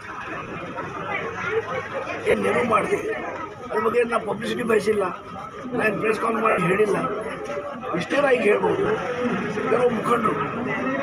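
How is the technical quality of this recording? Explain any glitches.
The recording has repeated dropouts, with light codec softening underneath.

Lost LE Audio frames occur at 0.36–0.56 s, 2.31–2.34 s, 3.91–3.94 s, 6.50–6.58 s and 8.84–8.86 s. When frames fail to arrive, the LC3 decoder fills the gap by repeating the last spectrum with scrambled phase. Tones therefore turn briefly into a noisy smear. The first event loses about 140 ms scattered over 200 ms, with the longest run roughly 40 ms. The others are single gaps of 20–80 ms, heard as short grainy blurs.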